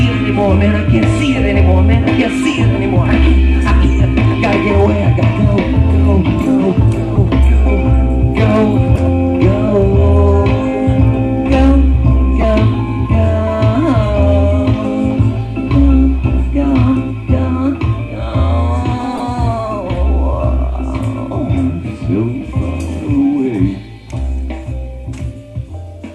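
Brief chirps and noise bursts at 7.15–7.18, 8.95–9.02, 12.41–12.44 and 19.15–19.20 s are corrupt frames decoded: damaged compressed frames were played anyway, spraying energy at the wrong frequencies.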